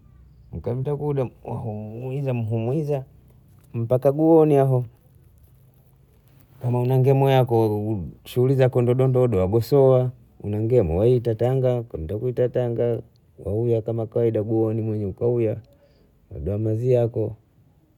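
No technical faults are audible.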